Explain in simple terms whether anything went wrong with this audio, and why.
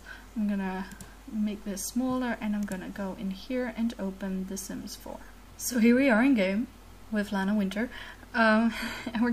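Yes. Throughout the clip, quiet passages turn gritty and grainy, with distortion that tracks the sound. Likely cause: low bit depth without dither, which fits roughly 8 bits, truncated.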